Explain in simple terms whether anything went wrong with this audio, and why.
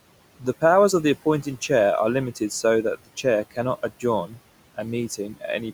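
A noise suppressor was working on this speech the whole way through, and it left noise suppressor artifacts. It keeps cutting whatever it judges to be steady background noise, so the quiet room noise drops away between words and then comes back underneath them as the talking resumes.

At 4.27 to 4.39 s there is speech cut by the noise suppressor. For about a tenth of a second, it mistook part of the speech for background noise and turned it down, so that short stretch sounds faint and partly swallowed.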